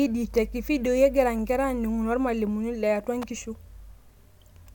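At 3.22 s a sharp snap cuts across the speech. It is an electrical switching spike, peaking around -20 dBFS. The likely cause is a nearby switch or motor arcing briefly, with the audio line picking up that discharge.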